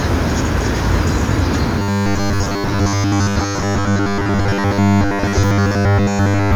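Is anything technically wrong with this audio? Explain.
Yes. Robotic sound from repeated short buffers runs from 1.79 to 6.55 s. It was likely caused by starved input, with roughly 10 ms segments replayed for most of that span, imposing a rigid, metallic 100 Hz buzz.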